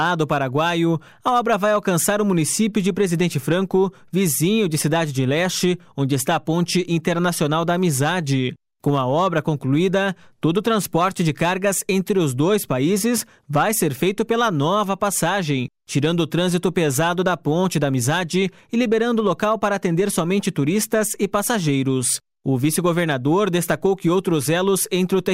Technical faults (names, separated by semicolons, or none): none